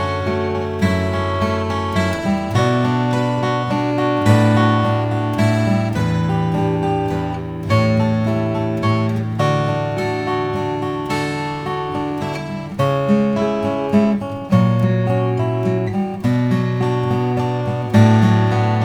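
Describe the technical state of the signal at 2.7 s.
At 2.7 s the converter's sampling clock is being shaken by interference at around 2 kHz, periodic clock jitter present throughout the clip. Each component gains sidebands about 2 kHz above and below it, strongest on high content, giving a rough, metallic edge.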